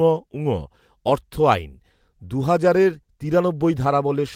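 No technical faults can be heard anywhere in this speech recording. Nothing in the audio breaks off, jumps or gives way at any point.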